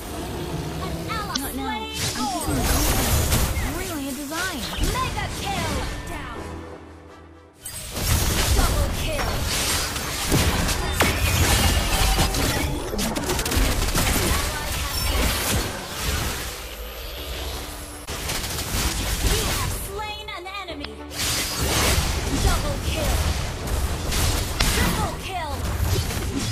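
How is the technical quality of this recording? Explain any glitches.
The recording has four brief glitches, all from damaged data in a compressed stream, at 1.32–1.37 s, 18.04–18.08 s, 20.81–20.85 s and 24.57–24.61 s. Each lasts about 40 ms. Corrupted bytes made the decoder misread frames and lose sync until the next frame header, producing a short chirp or blip.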